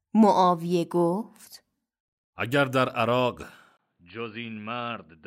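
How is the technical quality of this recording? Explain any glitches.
The recording has one clear glitch: at 3.77 s the speech abruptly turns dull and boxy and stays that way to the end, most likely because the input switched to a poorer device. A gap of about 20 ms marks the switch, and the level then drops by about 10 dB. The new path carries nothing above 4.7 kHz and brings its own noise floor, roughly 45 dB below the speech. On a spectrogram the upper band cuts off sharply at that moment; the waveform shows a brief flat gap followed by a smaller envelope.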